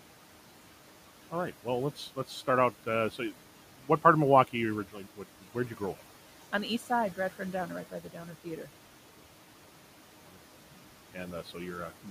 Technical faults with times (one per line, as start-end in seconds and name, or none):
0.00-12.11 noise suppressor artifacts
4.85-5.81 speech cut by the noise suppressor
7.91-8.47 speech cut by the noise suppressor